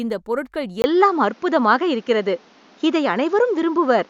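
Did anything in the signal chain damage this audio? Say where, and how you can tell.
Yes. At 0.82 s the capture path, at the input device and driver stage, most likely switched to a poorer device. After a 20 ms gap the speech becomes duller and boxier through to the end, with nothing above 7.1 kHz. The level shifts by roughly 5 dB, and a new background noise sits roughly 35 dB below the signal. The input switched to a poorer device, which brings its own narrower band, tone and noise floor.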